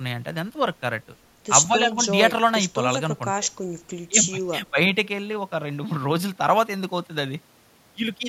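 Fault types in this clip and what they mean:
Sample clock jitter: the converter's clock wanders by about 0.7 microseconds, so samples land slightly off time. From 6.16 s to the end, the speech carries a faint hiss or roughness, roughly 45 dB down, strongest on loud and bright sounds and gone in pauses.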